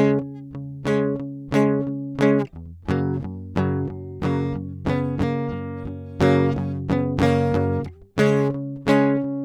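Nothing in this music stood out as a technical problem on listening.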